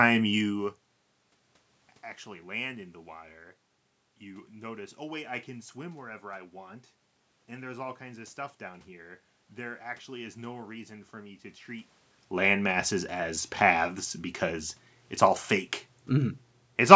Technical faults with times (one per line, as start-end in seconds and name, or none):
none